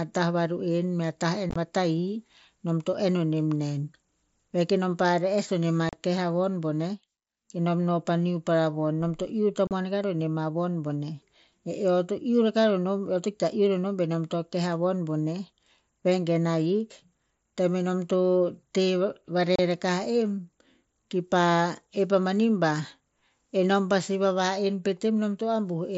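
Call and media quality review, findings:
Unconcealed Bluetooth headset packet loss: hard-edged dropouts at 1.50–1.56 s (about 45 ms missing in several gaps, longest 22.5 ms), 5.89–5.93 s (37.5 ms), 9.67–9.71 s (37.5 ms), 19.56–19.59 s (30 ms). Headset-to-phone link dropping runs of mSBC voice frames, replaced with silence or an idle pattern, no concealment. Waveform: flat gaps with vertical edges. Spectrogram: blank vertical bands cutting across the full wideband range up to 8 kHz.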